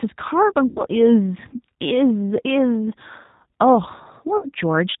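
A speech recording passed through the G.729 codec, which rebuilds the voice at what sounds like 8 kbit/s with nothing above 4 kHz, leaving it audibly band-limited, rough and slightly synthetic. VoIP packet loss concealed by the speech codec occurs at 0.68 to 0.85 s and 4.37 to 4.48 s. The decoder stretches its last pitch and filter into a buzzy tone or coloured noise that fades, and the gaps fit about 80 ms and 60 ms of lost packets.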